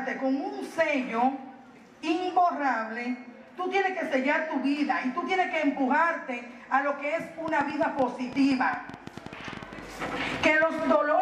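From 7.48 s to 10.83 s a train of clicks rides over the sound, about 9.9 per second at an uneven pace, some thirty in all, each peaking a little above the surrounding audio. The pulses share much the same sharp shape and are heard as a ticking, popping patter, likely from electrical interference or a faulty connection or power supply. On a waveform they show as narrow spikes; on a spectrogram, as thin vertical broadband lines at irregular spacing.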